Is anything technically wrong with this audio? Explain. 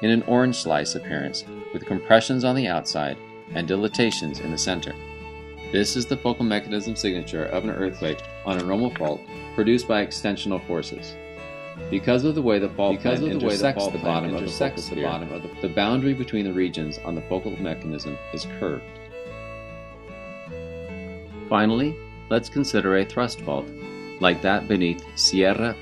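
Yes. From 12.61 to 15.53 s the sound is joined by a second copy, about 5 dB quieter, trailing about a second behind, dry and starting and stopping abruptly. This is a doubled audio track, likely from the same signal being captured again through a slower path.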